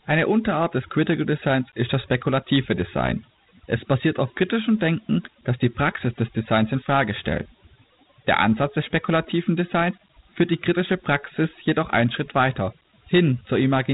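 From start to finish the speech carries overdone noise removal. The reduction was pushed so hard that any frequency band sitting near the estimated noise level is pulled far down or shut off, and the softer parts of the voice are cut along with the hiss. The background falls to near silence scattered with twinkling specks. On a spectrogram the gaps between words look almost empty apart from isolated bright dots, and the quieter harmonics break into ragged fragments.

Also present throughout is Dialogic VOX ADPCM coding, with plainly audible damage. This 4-bit adaptive scheme stores only the step from one sample to the next at coarse precision, so a gritty hiss rides along with the speech and rises and falls with it. The grain and narrowness point to roughly 32 kbps at 8,000 samples a second. Nothing is present above 3.8 kHz, so a spectrogram shows a hard ceiling there, with grainy noise filling the band beneath it during speech.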